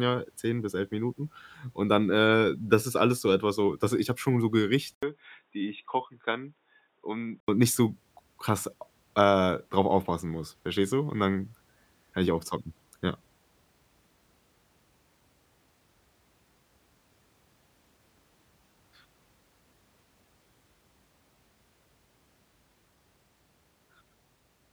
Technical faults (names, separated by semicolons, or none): input switched to a poorer device